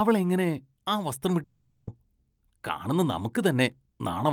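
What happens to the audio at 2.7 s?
Nothing goes wrong at 2.7 s; the speech carries on cleanly through that point with no dropout, click, distortion or other fault.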